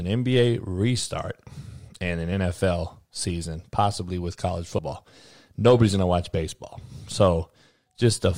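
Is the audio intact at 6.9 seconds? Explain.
Yes, the speech at 6.9 seconds is intact, with no audible fault at that moment.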